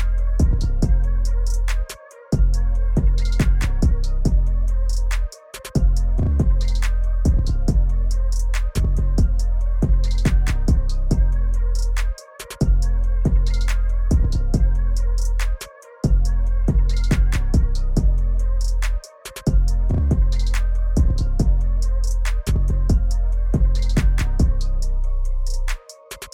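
No technical faults can be heard anywhere in this clip. The audio continues without any event that would point to a problem in recording or playback.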